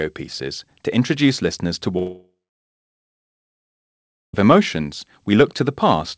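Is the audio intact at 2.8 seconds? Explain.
No. At 2.8 seconds there is only silence. Just after "to introduce listeners to", at 1.98 s, the sound smears into a short fading buzz that dies away within a few tenths of a second, leaving nothing until the audio returns at 4.35 s with about 2.4 s missing. This is likely a long network dropout: packets stopped arriving, the receiver briefly extended the last sound, then fell silent, and the lost stretch was never recovered.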